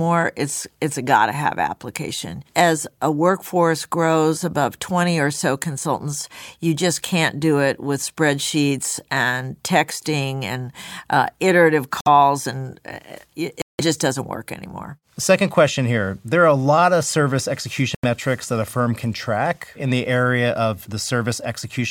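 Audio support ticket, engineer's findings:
Likely Bluetooth stall: headphone buffer ran dry while delayed packets were resent. Speech drops to silence, then resumes: 12.01–12.07 s (about 54 ms, after "texting and uh iterative"), 13.62–13.81 s (174 ms, before "doesn't work anymore"), 17.95–18.05 s (87 ms, between "lot of service" and "that a firm can").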